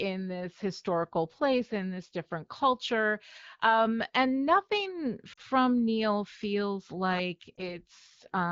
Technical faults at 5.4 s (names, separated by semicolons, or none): lost AMR speech frames